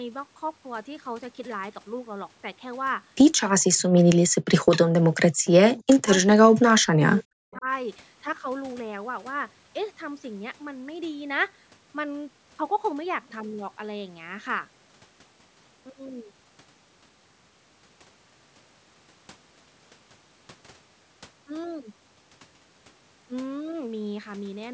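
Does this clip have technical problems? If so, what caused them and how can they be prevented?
Yes. From 3.56 to 4.69 s, 5.0 to 6.08 s and 6.26 to 7.66 s, the speech drops by up to about 40 dB. This is likely speech suppressed in double talk: the echo canceller turned it down while the far side spoke. Stronger double-talk detection prevents this.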